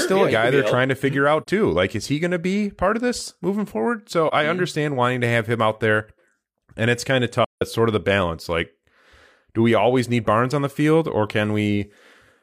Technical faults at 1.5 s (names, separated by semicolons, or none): AAC frame loss with muting